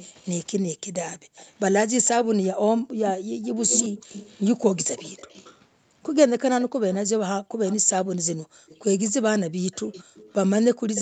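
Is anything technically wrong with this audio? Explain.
Yes, two kinds of fault are present.

Echo leak, 0.0 to 0.3 s, 1.36 to 5.62 s, 6.61 to 7.77 s and 8.69 s to the end: the far side's echo canceller, likely on a loudspeaker, let residue through, so a delayed copy of the speech trails it by roughly 205 to 240 ms, sitting about 15 to 25 dB below the direct sound.

Background gated by the echo canceller, 1.19 to 1.36 s, 2.82 to 3.44 s and 7.43 to 10.15 s: the canceller clamped the microphone while its loudspeaker played. Room sound drops by about 34 to 39 dB, in dips totalling around a sixth of a second, under half a second and most of a second, before recovering.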